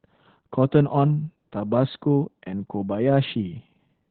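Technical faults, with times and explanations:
Throughout: Opus voice compression in narrowband SILK mode, with nothing above about 4.4 kHz. Heavy coarse excitation coding, fitting roughly 8 kbps, makes the speech muffled, hoarse and slightly robotic.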